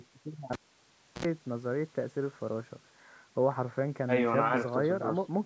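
At 0.53 s the cable is pulled and plugged in: a pop, then near silence for 0.67 s while the lead is out. Reinserting it gives 68 ms of 60 Hz mains buzz as only the tip touches, and a second pop at 1.25 s restores the sound.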